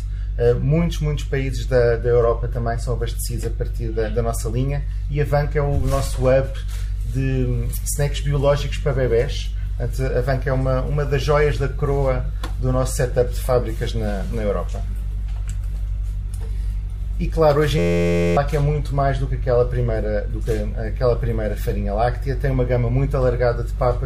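A system hang loop runs from 17.79 to 18.37 s. The playback side stalled while the sound hardware kept reading the same ring buffer, so one 11.61 ms slice of audio repeats back to back, which fits a 512-sample buffer. Repeating that quickly, the slice fuses into a steady buzz at about 86.1 Hz instead of a stutter. Meanwhile about half a second of the real audio is lost before normal playback resumes.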